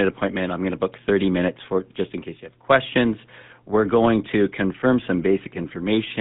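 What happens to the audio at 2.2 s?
At 2.2 s, as throughout the clip, the speech has passed through the GSM full-rate codec, and the coarse coding fits its 13 kbps rate. The coder models the vocal tract and excites it with a sparse, regularly spaced pulse train, discarding most of the excitation detail, while the line keeps only about 150 Hz to 3.6 kHz. The result is plainly audible: muffled, band-limited speech with a buzzy, gravelly roughness.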